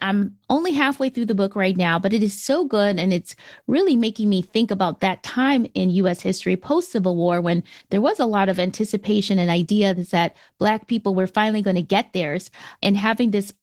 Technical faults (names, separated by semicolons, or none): Opus voice compression